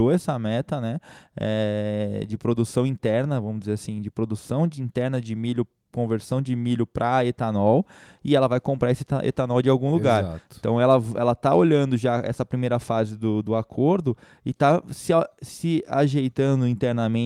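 Nothing technical goes wrong anywhere in this stretch of speech; there's simply no fault to report.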